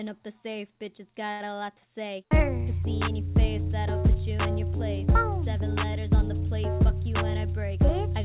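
At 1.32 s there is a short stall from a late packet, lasting until about 1.42 s. A packet did not arrive in time and the jitter buffer ran dry. The receiver kept stretching the last bit of sound for 77 ms. When the packet came, playback resumed exactly where it left off. Nothing is lost. Instead, a sound hangs on too long, with a faint buzz or dip. From then on everything plays 77 ms later.

From 7.45 s to 8.15 s there is a jitter buffer speed-up. The buffer was holding more audio than it wanted. To shrink the delay, the receiver cut out many tiny pieces, each one or a few pitch periods long. In total it removed roughly 50 ms. Playback runs at about 106% speed with the pitch unchanged. The passage sounds slightly rushed. Throughout, the band stops at 4 kHz, which fits a narrowband G.711 A-law call codec.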